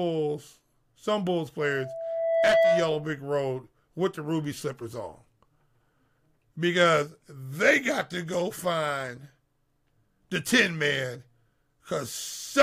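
The microphone picked up its own loudspeaker, causing loudspeaker feedback squeal in this speech: from 1.59 to 3.17 s a 660 Hz tone swells over about a second to roughly 5 dB above the speech.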